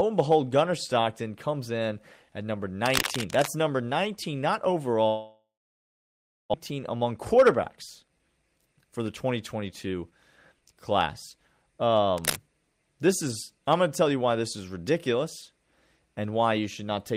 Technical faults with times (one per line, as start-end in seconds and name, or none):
2.84-3.48 cable scratch noise
5.07-6.56 long network dropout
6.71-10.12 jitter buffer speed-up
10.54-11.34 jitter buffer speed-up
12.17-12.37 cable scratch noise